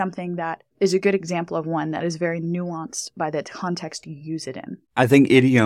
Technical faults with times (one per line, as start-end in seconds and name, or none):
4.03 repeated buffer